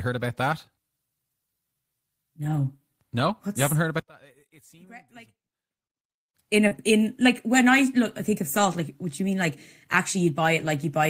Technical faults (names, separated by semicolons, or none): lost packet rebuilt from error correction; one channel inverted; short concealed packet loss